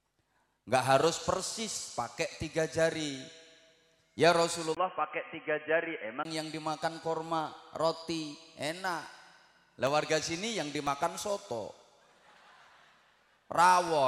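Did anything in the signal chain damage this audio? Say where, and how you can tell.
Yes. At the input stage, from 4.75 to 6.25 s the sound turns dull and boxy, with nothing above 3.2 kHz. A 20 ms gap marks the switch. A faint new noise floor appears while the level holds steady. This likely means the input switched to a poorer device.

At the driver or buffer stage, periodic USB or driver dropouts run from 8.37 to 13.88 s. Every 0.5 s, about a millisecond of audio is replaced by silence. That gives around ten evenly spaced ticks, heard only while signal is present.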